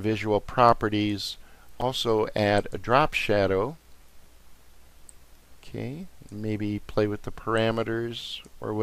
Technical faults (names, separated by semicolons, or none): chunks out of order